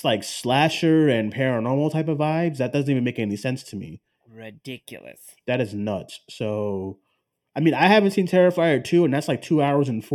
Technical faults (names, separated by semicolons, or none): channel delay (comb filtering)